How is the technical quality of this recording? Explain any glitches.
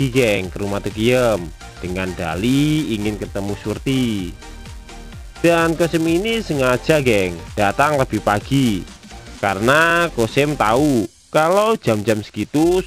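The recording is marred by a steady buzz that runs through the whole clip. A filter restarted on every block, throughout: the filter discards its memory at each block boundary and starts from silence, so every block opens with a small transient. These repeat as a buzz at about 345 Hz, which fits a 128-sample block, and the buzz rises and falls with the level of the sound.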